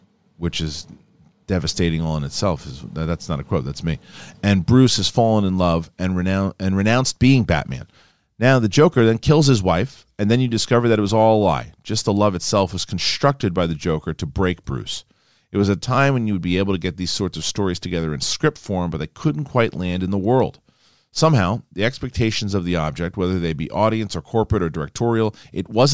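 A recording of speech, and nothing technically wrong turns up in it anywhere.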